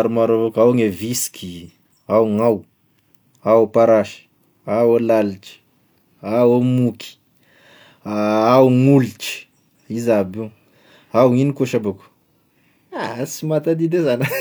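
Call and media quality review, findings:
No audible faults found in this speech recording. Nothing to escalate; ticket can be closed.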